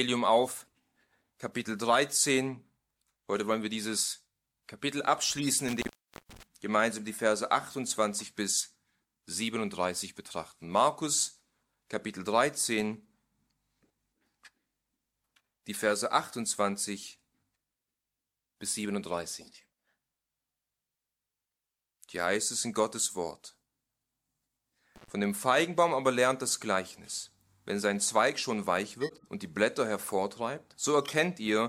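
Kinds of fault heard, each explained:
corrupt frame decoded: Damaged compressed frames were decoded anyway, throwing energy into wrong frequencies. Three short bursts of spurious noise or chirp appear, at 5.37, 29.01 and 31.05 s. Each lasts about 70 to 260 ms, a few frames' worth, peaking around -20 to -25 dBFS.
intermittent contact: A loose connection briefly opens the signal path. The sound drops out with crackle at the break and return. The first gap, from 5.68 s, lasts about 480 ms. A shorter one at 24.96 s lasts about 110 ms.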